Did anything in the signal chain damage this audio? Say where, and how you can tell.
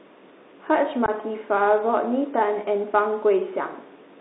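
Yes. The codec stage shows Bluetooth CVSD headset codec damage throughout. The sound is confined to roughly 250 Hz to 3.7 kHz, with a grainy hiss and scratchy, overloaded sibilants. The one-bit slope coder, fitting a 64 kbit/s link, cannot follow fast high-frequency swings. A generic low-pass filter would dull the sound without adding grit.

At the wireless link, unconcealed Bluetooth headset packet loss cuts a hole from 1.06 to 1.09 s, about 18.8 ms of missing signal, roughly a handful of packets. The edges are abrupt, and the level dips briefly on return. A concealed loss would be smoothed over instead.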